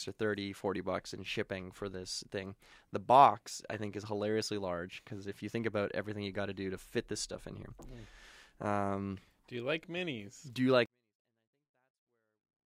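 At 10.86 s the speech drops about 48 dB and stays nearly inaudible but clean to the end: a 24-bit alignment error, low-byte 24-bit samples read as full 32-bit words.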